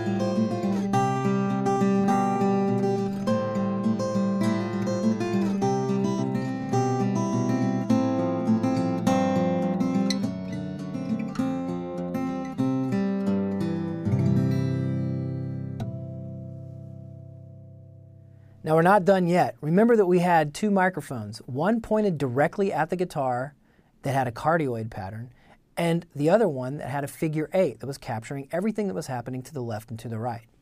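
No technical faults can be heard anywhere in the recording.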